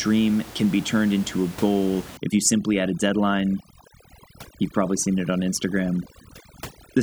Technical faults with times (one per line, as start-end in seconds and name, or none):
2.17-7.03 overdone noise removal